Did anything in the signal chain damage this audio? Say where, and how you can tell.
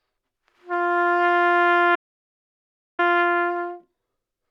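Yes, an audio dropout to silence: the input link likely failed while the recorder kept writing silence, leaving dead silence with no room tone from 1.96 to 2.99 s.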